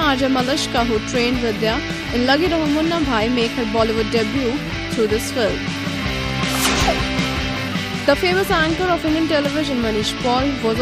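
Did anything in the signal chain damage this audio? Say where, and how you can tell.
No, nothing stood out on listening that would point to damage at any stage of the signal chain.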